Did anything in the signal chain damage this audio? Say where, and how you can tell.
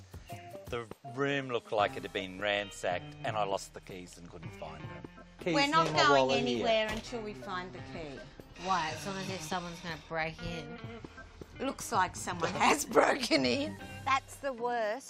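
No, nothing in this audio stood out on listening as a sign of damage anywhere in the signal chain.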